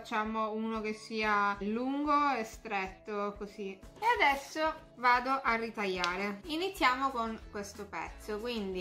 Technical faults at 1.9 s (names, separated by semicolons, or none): none